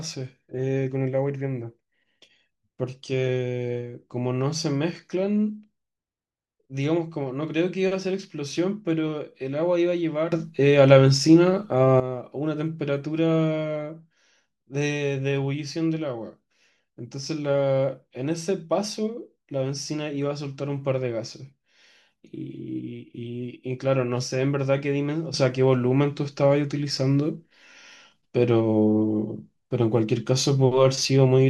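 At 10.32 s the level jumps up about 12 dB until 12.0 s, and again about 7 dB from 25.34 s to the end: a sudden gain jump, likely gain applied with no ramp.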